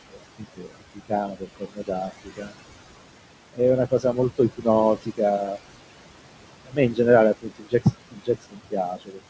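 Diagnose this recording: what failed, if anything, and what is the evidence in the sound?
Noise suppressor artifacts, call processing: the room noise, about 12 dB under the speech, is pulled down about 20 dB in gaps.

Speech cut by the noise suppressor, same stage: soft speech is mistaken for noise and dropped up to about 21 dB at 0.1–2.54, 3.91–5.57, 6.65–6.99 and 7.34–9.30 s.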